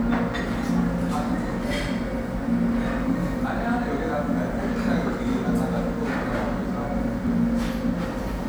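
No technical faults are audible anywhere in the recording.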